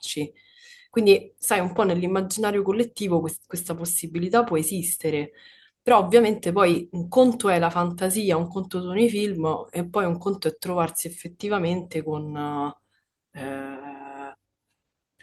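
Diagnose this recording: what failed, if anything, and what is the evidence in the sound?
Nothing failed; no stage shows any fault.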